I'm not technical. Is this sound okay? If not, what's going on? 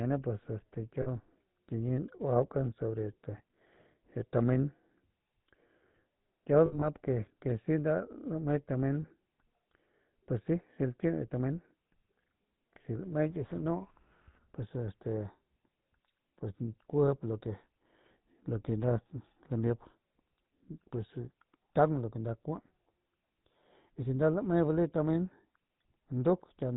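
No. The whole recording has a buzzy, gravelly roughness and sounds muffled, with nothing above about 4 kHz. That comes from the GSM full-rate codec, an old mobile-phone format that rebuilds the voice from a simplified model with coarse pulses.

There are also lost GSM frames. Right after "pues este" at 1.02 to 1.07 s, at 6.66 to 6.86 s, and at 9.02 to 9.05 s, the sound briefly freezes into a short metallic ring. The phone filled each gap by repeating the last good sound.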